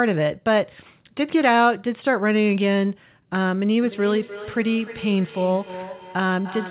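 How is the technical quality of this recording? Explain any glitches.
The recording has one clear fault: feedback echo between two devices in the second half. The audio stops at 4 kHz, which fits narrowband telephone coding. From 3.83 s to the end, the speech comes back as a delayed copy roughly every 0.3 s, peaking about 14 dB below the direct speech. A second device in the room is replaying the call, and this microphone picks it up again. Each device's echo canceller removes only its own playback, so the loop sends the sound back thinner and more ringing.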